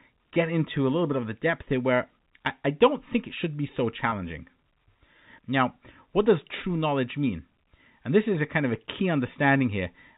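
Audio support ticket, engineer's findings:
Packet loss with pitch repetition, 4.10–4.12 s, just after "it should be so". Brief held, buzzy sound. Receiver concealment repeated the last pitch period. Gap fits one 20 ms packet.

G.711 telephone path: band stops at 4 kHz, as expected for A-law.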